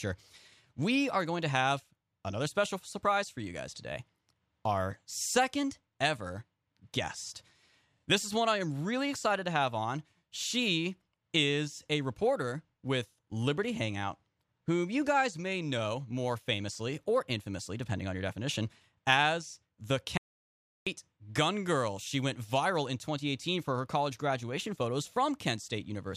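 At 20.18 s, right after "your definition as the", an audio dropout to silence hits. Sound stops dead until 20.87 s. The input likely disconnected briefly.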